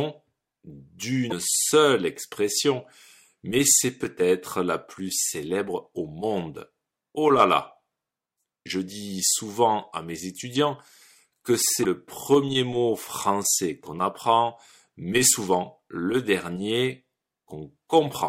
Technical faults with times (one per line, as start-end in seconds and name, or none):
1.29-1.33 broken MP3 bit reservoir
11.82-11.85 broken MP3 bit reservoir